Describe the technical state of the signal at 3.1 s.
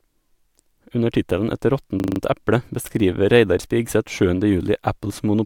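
At 3.1 s the speech signal is intact, with no audible fault at that moment.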